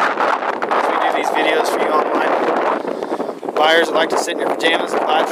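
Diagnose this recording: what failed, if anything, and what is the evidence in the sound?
Nothing failed: no stage from wiring through converter, buffer, processing, transport or playback leaves any audible fault anywhere in the recording.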